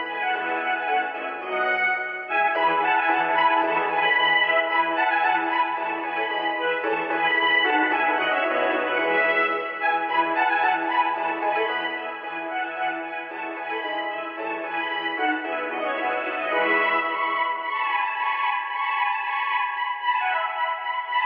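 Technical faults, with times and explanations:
No technical faults detected.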